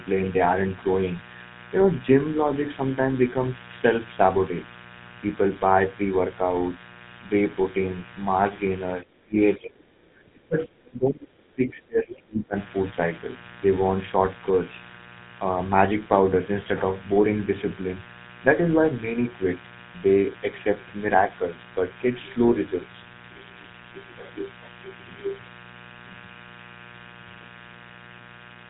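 A steady, raspy buzz sits under the speech for the whole clip, roughly 20 dB below it. This is mains buzz built on 60 Hz: sharp switching spikes from a dimmer, rectifier or unshielded line, repeating twice per cycle and spraying harmonics up into the kilohertz range.

Throughout, the voice also has a gravelly, buzzy roughness and nothing above 3.8 kHz, which fits the GSM full-rate codec at 13 kbit/s. That codec rebuilds the voice from a vocal-tract model fed by coarsely spaced pulses, so the fine texture and upper band are lost.

At 9.0 to 9.37 s, 9.58 to 9.82 s and again from 10.31 to 12.56 s, the speech sinks sharply, by around 25 to 30 dB at worst. The likely cause is speech suppressed in double talk: with both ends talking at once, the echo canceller mistook the talker for loudspeaker echo and pulled the level down.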